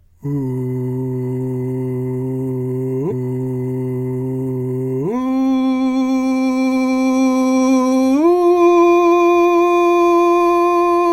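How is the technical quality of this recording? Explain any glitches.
There's one clear glitch in this music: a stream segment repeated. At 5.07 s the playback jumps back to 3.07 s and plays that stretch again, so about 2.0 s of the music is heard twice. That happens when the player fetches or queues the same chunk of the stream a second time and plays both in order. You hear a small blip at the jump, then a couple of seconds you've already heard, as if the music stuttered backward.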